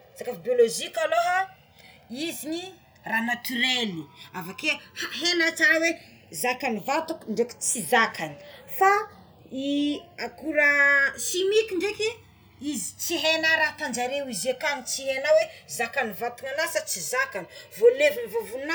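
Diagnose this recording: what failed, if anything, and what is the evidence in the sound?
The channels drift apart throughout this speech, a converter clocking fault: two devices on separate clocks differ by roughly 200 parts per million, so the inter-channel delay creeps toward about 2 ms. In mono, comb notches sweep slowly, unlike the static coloration of a fixed offset.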